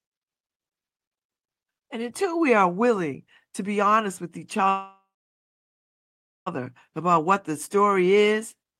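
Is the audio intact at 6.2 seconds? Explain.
No, 6.2 s falls inside a call audio freeze from 4.69 to 6.48 s, likely from delayed packets emptying the jitter buffer. After "be honest with each", the sound fades into about 1.4 s of silence, then resumes with nothing lost.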